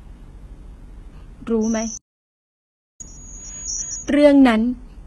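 From the first moment to the end, the speech carries heavy codec damage that is likely HE-AAC compression, at a rate that fits roughly 16 kbps. Only the lower spectrum is really coded. The treble is rebuilt by copying lower bands upward, so sibilants sound gritty and metallic, and the harmonics above the crossover don't line up. On a spectrogram the upper region looks smeared and blocky, with a hard ceiling at 11.8 kHz and nothing above it.

At 1.62 s a loudspeaker feedback squeal begins. A microphone is picking up the speaker it feeds, and at 6.1 kHz the loop gain goes above one, so that single tone feeds itself. Over about a second it swells until it sits at roughly the same level as the speech, a piercing whistle that cuts off at 4.12 s. A spectrogram shows one bright horizontal line at 6.1 kHz that thickens as it grows, and the waveform's envelope rises to match.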